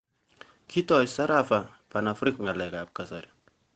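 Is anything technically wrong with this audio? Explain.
No, nothing here is technically wrong: the speech carries the normal character of a call path, with nothing above 8 kHz and the usual coding texture that fits an Opus stream at around 20 kbps.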